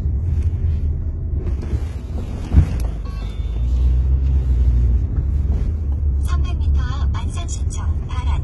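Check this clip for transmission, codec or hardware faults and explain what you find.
One codec fault runs through the whole clip. It sounds like HE-AAC compression at a very low bitrate, likely around 16 kbps. The treble is rebuilt from copied lower bands, so it rings metallic and gritty. Nothing reaches above 11.7 kHz. The damage is heavy.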